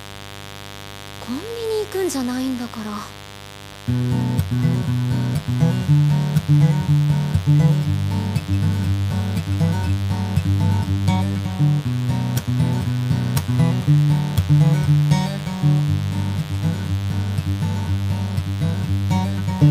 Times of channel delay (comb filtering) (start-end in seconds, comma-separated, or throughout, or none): none